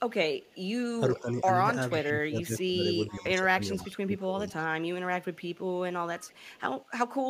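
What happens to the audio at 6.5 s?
Around 6.5 s there's an echo leak: from 6.19 to 7.11 s a faint, delayed copy of the speech trails behind it by about 477 ms, sitting roughly 30 dB under the direct signal, so you hear a quiet ghost of what was said half a second earlier. The likely cause is a far end on a loudspeaker whose echo canceller didn't fully scrub what its mic picked up, so the leftover got sent back down the line.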